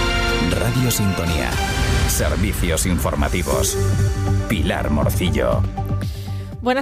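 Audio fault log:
0.75–0.80 s, frames out of order: two adjacent blocks of about 23 ms each play swapped, giving a brief flutter.
3.89–4.08 s, frames out of order: two neighbouring runs of about 93 ms each play in reverse order, so the sound jumps forward then back.
5.09–5.20 s, frames out of order: two blocks of about 46 ms exchange places, producing a short garbled stutter while overall timing stays intact.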